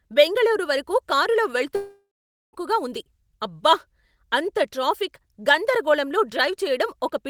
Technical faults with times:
1.75-2.55 long network dropout

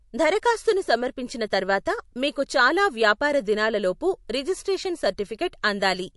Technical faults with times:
0.00-6.16 MP3 compression

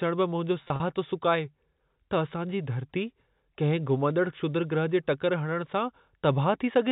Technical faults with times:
0.64-0.80 packet loss with pitch repetition
4.10 electrical switching spike

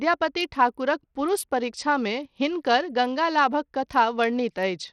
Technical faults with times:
0.00-4.93 Bluetooth SBC compression

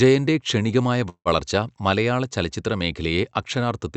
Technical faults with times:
1.09-1.28 call audio freeze

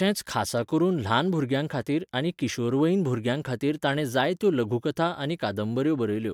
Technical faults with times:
none

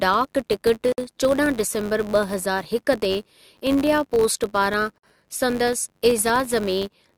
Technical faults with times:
0.00-7.17 filter restarted on every block
0.92-0.98 gap at a join of encoded pieces

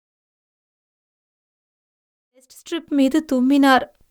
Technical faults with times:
none

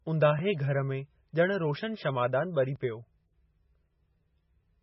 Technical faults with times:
0.00-4.83 MP3 compression
2.76 dropped buffer (overrun)

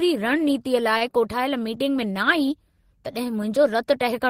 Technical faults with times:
0.97-1.04 short stall from a late packet

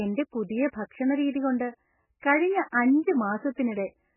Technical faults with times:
0.00-4.16 MP3 compression

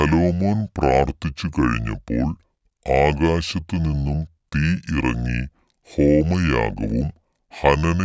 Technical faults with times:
0.00-8.04 wrong sample rate

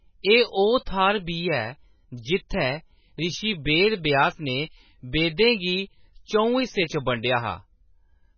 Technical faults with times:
0.00-8.38 MP3 compression

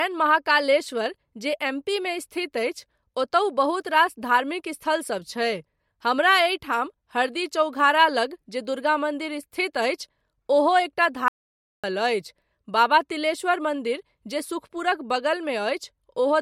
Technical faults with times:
11.28-11.84 audio dropout to silence

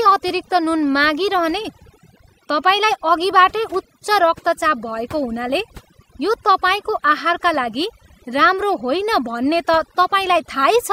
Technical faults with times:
0.00-10.93 overdone noise removal

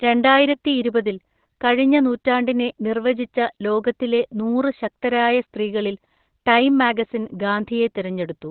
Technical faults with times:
0.00-8.50 Opus compression

